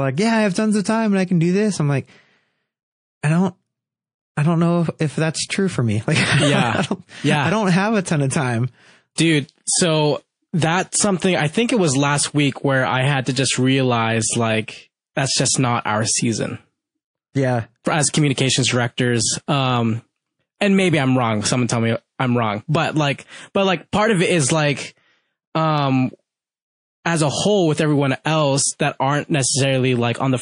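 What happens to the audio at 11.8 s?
At 11.8 s the speech carries MP3 compression artefacts that run through the whole clip, most likely from an encoder starved of bits, which fits a rate near 40 kbps. It lets weak frequency lines flicker frame to frame, so the speech sounds watery and swirly, with chirpy s sounds and smeared attacks.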